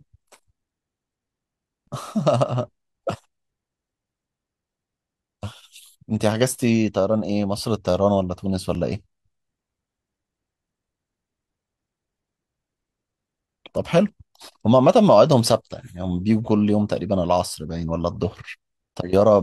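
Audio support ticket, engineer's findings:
Skip at 8.75 s, with the speech jumping slightly forward rather than pausing. No gap or silence, just a hard join. Likely a dropped buffer (overrun) in the capture path: the app didn't read the input in time, the hardware overwrote a block of samples, and the two sides spliced directly, losing a few milliseconds of audio.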